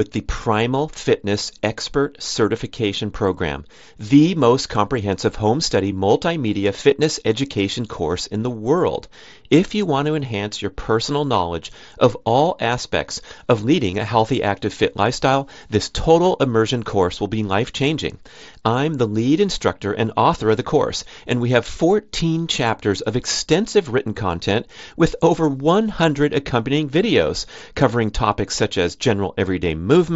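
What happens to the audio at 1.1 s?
At 1.1 s nothing goes wrong: the speech carries on intact through the Bluetooth mSBC headset link, with only the light graininess on loud sounds and narrowed top end that this wideband headset codec leaves.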